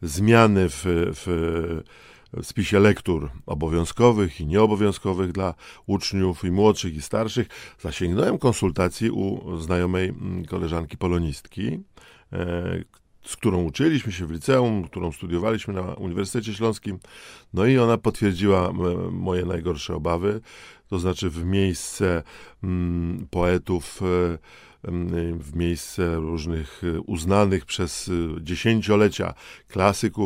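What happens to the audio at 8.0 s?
Nothing goes wrong at 8.0 s: the speech there plays through intact, with no dropout, click, distortion or other fault.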